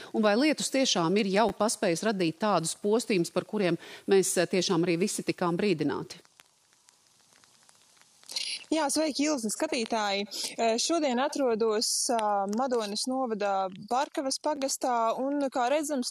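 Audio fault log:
1.49–1.51 s, repeated buffer: fresh audio arrived late, so the player replayed its last 10 ms block twice more, producing a brief buzzy stutter with hard joins and nothing lost.
9.75–10.27 s, CD scratch ticks: a disc blemish defeated error correction once per revolution, so three tiny ticks, the longest only about a millisecond, mark the concealed samples.
14.56–14.58 s, repeated buffer: the same late-delivery stall recurs, with one 10 ms block played twice extra, heard as a short click-like buzz at each hard join.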